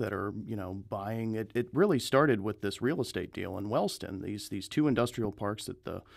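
At 5.25 to 5.27 s, right after "these these two", a single sharp pop cuts across the speech and peaks at roughly 5 dB above it. This loud pop is likely a brief voltage pulse from a switch, plug or static discharge entering the signal path, while the speech continues underneath.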